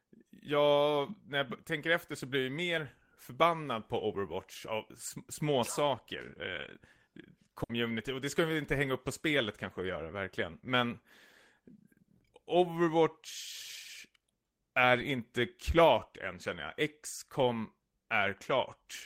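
At 7.63 to 7.72 s, a burst of packet loss: consecutive packets fail to arrive in time, so the receiver extends the last sound for 60 ms as a fading, held tail. It then skips ahead, so 60 ms of speech just before "och det ska vi" is missing.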